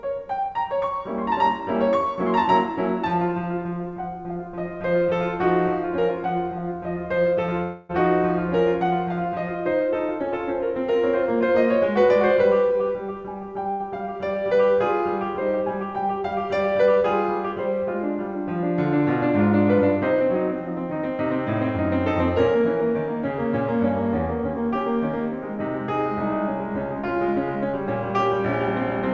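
A music recording carried over a call link whose G.722 coding leaves nothing above 8 kHz, and it has two timing faults. From 7.63 to 7.91 s there is a call audio freeze: the sound stops moving forward and the last moment is drawn out as a fading buzz for about 262 ms before the music picks up exactly where it left off. Nothing is dropped; a gap has simply been inserted, pushing everything after it later. The likely cause is packets held up in transit long enough for the jitter buffer to run dry, with the receiver filling the wait by extending the last audio. At 13.71 to 13.81 s a short stall from a late packet holds one sound about 81 ms too long, with a slight buzzy dip, before playback resumes from the same point. Here a single packet missed its playout time, the buffer emptied, and the receiver stretched the preceding audio until the packet arrived.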